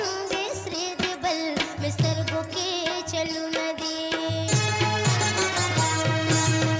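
Nothing here stands out as a technical fault; the audio runs along without any glitch worth pointing to.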